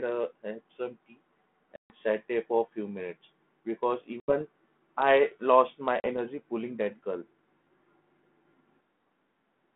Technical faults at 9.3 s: none

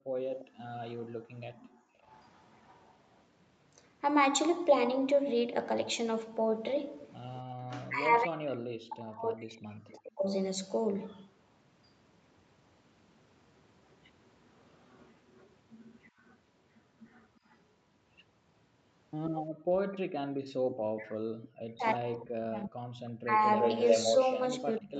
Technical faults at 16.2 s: echo leak

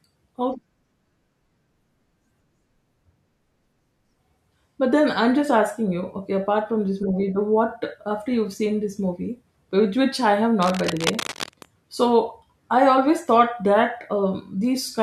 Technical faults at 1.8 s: none

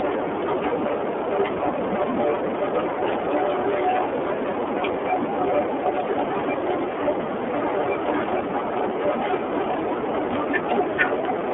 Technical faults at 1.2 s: iLBC codec

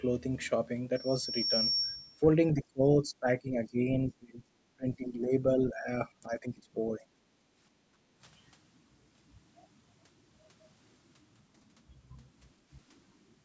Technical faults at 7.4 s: background gated by the echo canceller

